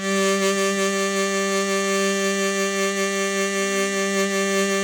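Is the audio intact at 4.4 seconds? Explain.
No. At 4.4 seconds, as throughout the music, the sound has plainly audible Bluetooth LC3 compression damage, likely from LC3 coding in 10 ms frames. Its grainy, breathy upper detail suggests noise filling where the spectrum was thinned, which fits about 48 kbps. Content extends to about 20.2 kHz.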